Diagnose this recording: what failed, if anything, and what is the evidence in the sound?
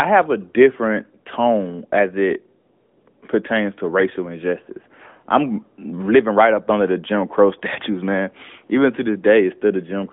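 Nothing failed in this recording.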